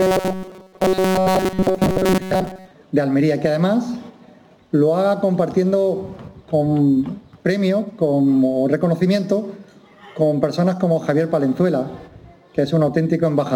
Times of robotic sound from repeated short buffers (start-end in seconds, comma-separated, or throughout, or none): 0.01-2.71